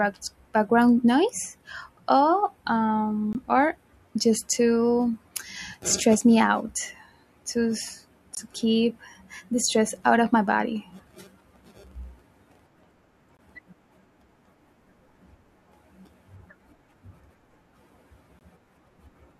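At 3.33, 8.35, 13.37 and 18.39 s the speech drops out for 20 ms each time. That's a classic gap between chunks: the audio arrived or was stored in 5-second pieces, and a sliver of silence got inserted at every join. Nothing is cut from the speech itself; it just gets pushed apart. By ear you get tiny hard-edged holes, evenly spaced about five seconds apart, almost like a stutter on a fixed clock.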